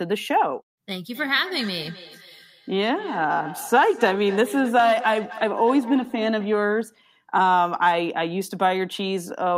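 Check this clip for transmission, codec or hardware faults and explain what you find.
One fault is present in the speech. Feedback echo between two devices, 1.13 to 6.53 s: a second device replays the first's audio into its microphone, returning each word about a third of a second later, thinner and ringing, at about 16 dB below the speech.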